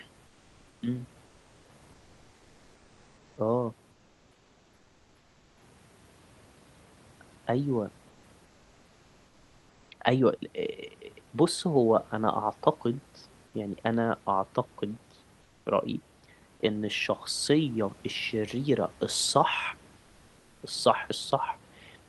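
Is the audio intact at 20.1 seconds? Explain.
No. From 19.97 to 20.61 s the real room background gives way to comfort noise, likely from discontinuous transmission. A steady, featureless hiss about 2 dB quieter fills the pause rather than silence, which distinguishes it from a dropout.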